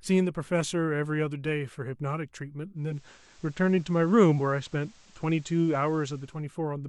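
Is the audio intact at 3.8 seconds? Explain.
No. At 3.8 s you're in the middle of a digital radio blend to analogue that runs from about 2.74 to 6.48 s. The receiver lost its digital stream and cross-faded over about 394 ms to the station's FM broadcast. A low hiss sits roughly 30 dB under the signal, and the level shifts by about 2 dB.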